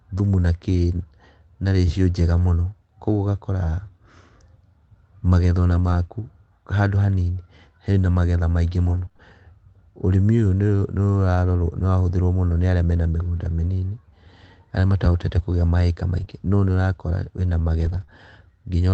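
At 2.37 s, after "na ratio njega", there is a lost packet rebuilt from error correction. It lasts 0.06 s. The next packets carried a low-bitrate copy, so nothing drops out. The rebuilt sound is just rougher and noisier. The same happens at 5.71 s for 0.22 s.

From 8.85 to 9.21 s, after "hena magetha maingĩ", repeated packet loss gives a robotic sound. Four short holes, the longest 24 ms, are each patched by stretching the last sound. The result is choppy, with slivers missing.

Another rebuilt stretch comes at 13.37 s, lasting 0.1 s. At 16.17 s a 0.04 s rebuild follows. A short concealed packet loss follows at 16.25 s, after "arĩa matahotete kũgĩa maika". About 20 ms never arrived and was filled by continuing the previous sound, which makes a brief smear. A 20 ms rebuild sits at 16.28 s.

At 17.80 s a 0.22 s rebuilt stretch sounds grainy. At 18.04 s there is a second short concealed loss, heard as a quick wobble.

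The Opus call path limits the audio to about 8 kHz.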